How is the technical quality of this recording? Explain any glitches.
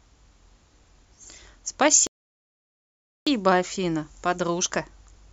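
The speech is interrupted by one playback glitch. A rebuffering stall runs from 2.07 to 3.27 s: the player exhausted its downloaded audio and paused until more data arrived. The speech drops to silence for about 1.2 s, then picks up exactly where it left off, with nothing missing but time added.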